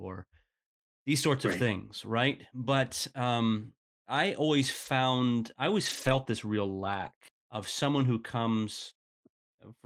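Speech, with a lost packet rebuilt from error correction at 1.51 to 1.53 s, between "these sorts" and "of things right". The 20 ms there, which points to a single lost packet, comes from the low-bitrate copy carried in the following packet, so there's no gap, just a briefly rougher, noisier patch. From 4.83 s to 9.17 s, starting after "um I always", come scattered short gaps: roughly seven small holes, the longest around 20 ms, covering about 3% of the span. Each was filled by extending the preceding sound, leaving brief ticks, smears or hiccups in otherwise continuous audio.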